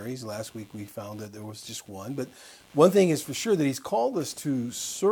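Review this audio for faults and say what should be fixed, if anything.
Computer activity noise runs throughout: processor and graphics load changes shift the ground shared with the audio circuit, leaving a buzzy, chirping pulse near 100 per second, roughly 30 dB under the sound, rising and falling with the computer's workload rather than the audio. Fix it by breaking the shared ground with an external or isolated audio interface, or a ground-loop isolator.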